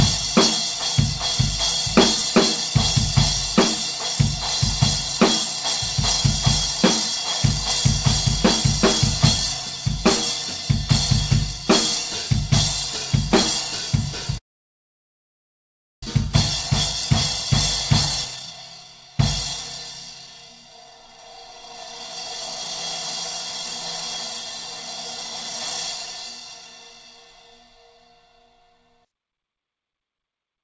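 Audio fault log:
14.38–16.08 s, long network dropout: the sound trails off and then there's about 1.6 s of silence. It likely comes from a stream gap of roughly 1.7 s. About 1 s of material never plays, so the sound resumes further along, with the delay shifted by roughly 0.7 s.
16.28–19.17 s and 20.12–21.74 s, jitter buffer speed-up: the receiver trims tiny pitch-period slices again and again to drain its backlog. The first stretch runs at 115% speed and sheds roughly 0.4 s. The second runs at 110% and drops around 0.2 s. Both sound hurried, though the pitch holds steady.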